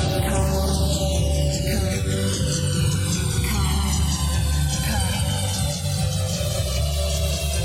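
From the start and through the whole clip, the two channels are drifting apart. They appear to run on separate clocks that differ by roughly 300 parts per million, so the delay between left and right creeps from nothing to about 2 ms by the end. Summed to mono, this gives a slow flanging sweep. On a spectrogram it shows as a comb of dark notch bands gliding gradually across the spectrum, their spacing narrowing as the delay grows.

At 1.97 s the digital radio blends to analogue FM, cross-fading over about 0.15 s. The blend back to digital comes at 5.85 s. Between those times the level stays the same, but a steady hiss floor appears, roughly 40 dB below the signal. A spectrogram shows this as a faint broadband haze filling the quiet gaps, with both edges softened by the cross-fade.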